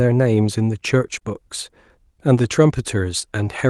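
A speech recording sent over an Opus call path, with the top end stopping around 12 kHz. Between 1.19 and 1.23 s there is short concealed packet loss: about 20 ms of audio arrived too late, and the decoder stretched the preceding sound before blending back, leaving a brief smear or wobble. From 2.49 to 2.51 s, one lost packet was rebuilt from error correction: its low-bitrate backup copy was played in place of the original, so the sound continues without a gap but turns rougher and noisier for those 20 ms.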